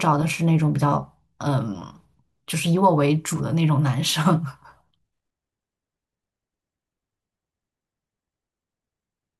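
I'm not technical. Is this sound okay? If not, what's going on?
Yes, this sound is okay, and nothing is going on with it that needs fixing.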